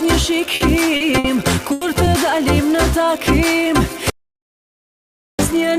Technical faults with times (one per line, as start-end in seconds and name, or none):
0.55-0.63 short stall from a late packet
0.96-1.03 short stall from a late packet
1.18-1.27 burst of packet loss
1.72-1.84 burst of packet loss
4.10-5.39 audio dropout to silence